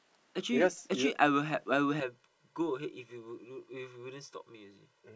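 Speech that turns hollow and phasey from 2.0 s to the end, from channel delay (comb filtering): one channel lags about 2 ms, notching the mono sum from around 300 Hz upward.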